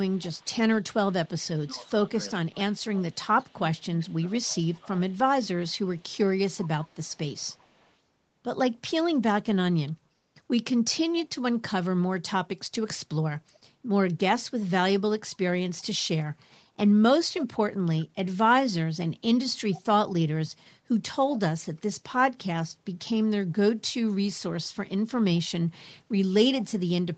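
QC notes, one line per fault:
0.1–1.3 s and 2.74–7.94 s, echo leak: a faint copy of the speech trails it by 386 ms at about 30 dB down, likely loudspeaker pickup the far end's canceller missed. On a spectrogram, ghost harmonics repeat the speech pattern, offset by 386 ms and capped at 8 kHz like the rest.
1.34–5.02 s, speech suppressed in double talk: the talker dips by up to about 20 dB in bursts totalling roughly 2 s, likely the canceller ducking both sides during overlap. The waveform shows notched envelope gaps in those stretches.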